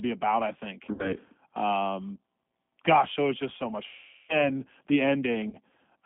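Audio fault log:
Throughout: G.729 codec. The speech is rebuilt from a vocal-tract filter, pitch predictor and sparse pulses at 8 kbit/s, so it sounds rough and faintly synthetic. The line band of 200 Hz to 3.4 kHz removes all brightness and low body.
0.93–1.15 s, 3.87–4.42 s, 5.50–5.57 s: VoIP packet loss concealed by the speech codec. After "about I think" and "was just so much", about 60 ms and 420 ms of audio go missing, then 30 ms. The gaps fit 30 ms packets. The decoder stretches its last pitch and filter into a fading buzzy tone or coloured noise, and the speech stays weakened briefly afterwards.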